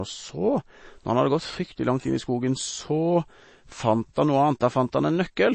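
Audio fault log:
Throughout, MP3 compression: the speech has nothing above 8.3 kHz and a plainly watery, swirling texture as weak bands flicker frame to frame, likely from a bit-starved encoder (fits about 32 kbps). A plain low-pass filter would dull the treble without this swirl.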